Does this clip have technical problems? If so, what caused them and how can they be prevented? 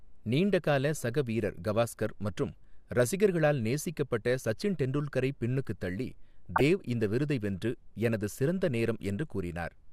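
Yes: DAB burbling at 2.53 s and 6.46–6.61 s, where weak reception let bit errors corrupt sub-band levels. The spectrogram shows scattered bright blocks. Better antenna placement prevents it.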